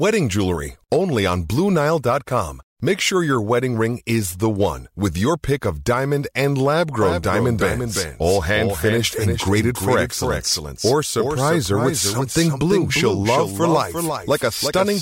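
A doubled audio track begins abruptly at 7.02 s and runs to the end of the speech. A second, full-band copy of the same audio trails the original by roughly 400 ms, sitting about 5 dB below it, with no decay or room colouring to soften it. The likely cause is the signal being captured a second time through a slower path, so every syllable is followed by a flat, hard-edged repeat.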